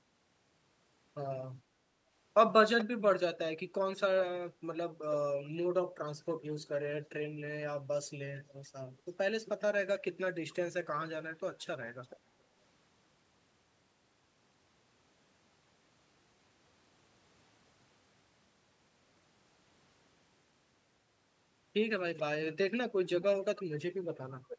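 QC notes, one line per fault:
2.78–2.85 s, 8.36–8.40 s, 12.03–12.20 s, 22.17–22.22 s, 24.48–24.57 s: echo leak. Brief, faint repeats of the speech return about 0.43 s after the original, roughly 10 to 25 dB below it. Likely a loudspeaker on the far end whose echo canceller let residue slip back. On a spectrogram these appear as weak, time-shifted copies of the preceding harmonic patterns, cut off above 8 kHz like the rest. The waveform shows small bursts trailing the louder speech.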